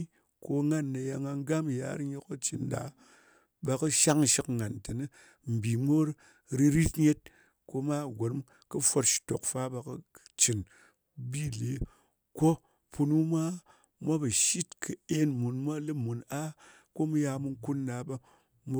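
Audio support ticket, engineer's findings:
Single sharp click at 3.87 s in speech. Dropped samples, likely cause: a fraction of a millisecond of stream lost, waveform jumps straight to a later value. Thin vertical line across the spectrum, one event only. Differs from a dropout: no audible gap, nothing missing from the speech, just the step discontinuity. Differs from crackle or a repeating buffer glitch: isolated, no recurrence elsewhere.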